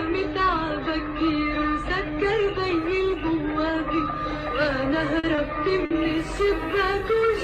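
Three short stalls from a late packet land close together near the end. The first is at 5.19 s, where the sound hangs for about 40 ms. The second follows at 5.35 s with a 20 ms hold, and the third at 5.85 s stretches for 50 ms. Each time a packet showed up late, the jitter buffer ran dry, and the receiver held the last bit of sound until it arrived. Nothing's dropped, but you hear a brief smear or slight buzz, and playback ends up a little behind.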